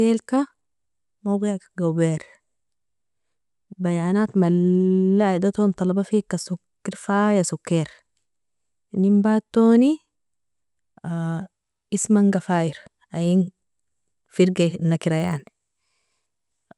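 From 15.16 s to the end at 16.78 s, the speech picks up a rough 25 Hz buzz from a resampler restarted on every block. Each 40 ms block was converted in isolation, likely from 24 kHz to 48 kHz, leaving a small error at every block edge that sounds only while the speech is present.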